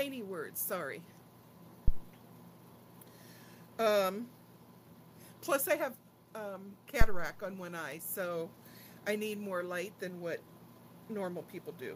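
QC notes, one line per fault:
1.88–2.04 s and 7.01–7.35 s, phantom power thump: deep low thumps peaking at about −14 and −11 dBFS, dying away within 37 and 75 ms, as a supply switching on the live input sends a voltage step through the coupling capacitors.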